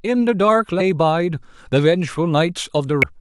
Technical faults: damaged data in a compressed stream

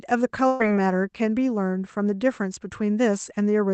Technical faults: burst of packet loss

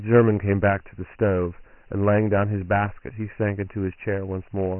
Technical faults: Dialogic VOX ADPCM

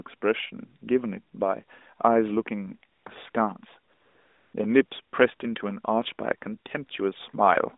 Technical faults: AMR comfort noise

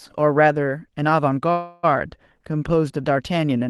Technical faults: call audio freeze

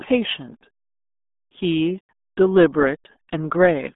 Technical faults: RealAudio 14.4 codec

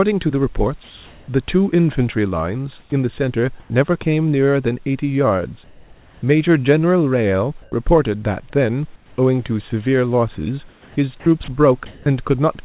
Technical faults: comfort noise in place of the background; sound chopped by the voice detector

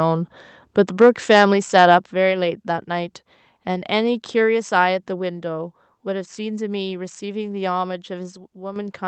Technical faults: microphone overload; microphone volume stepped down; sudden gain jump

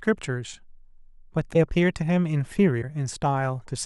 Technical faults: broken MP3 bit reservoir

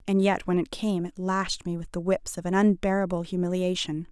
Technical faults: none

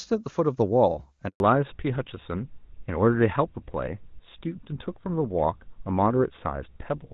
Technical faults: handover gap; fallback to narrowband

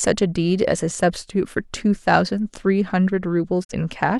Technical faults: digital broadcast dropout

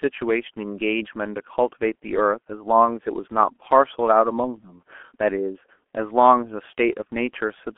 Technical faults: G.723.1 codec

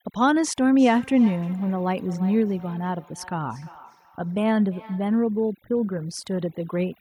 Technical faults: overdone noise removal; feedback echo between two devices

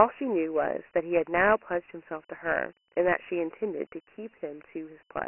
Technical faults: Dialogic VOX ADPCM

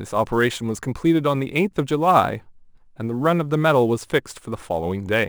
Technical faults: sample clock jitter

